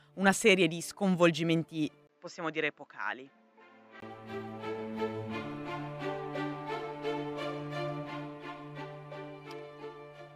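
From 2.07 s to 4.02 s the audio turns duller and somewhat quieter, losing everything above 7.6 kHz, with a brief 20 ms gap at the change and a faint new background noise underneath. This likely points to the input switched to a poorer device, a narrower-band device.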